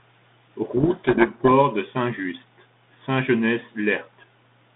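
From 0.76 to 1.52 s, a codec payload misread on the 32 kbit/s G.726 path unpacks code-word bits in the wrong order, burying the speech in harsh distortion.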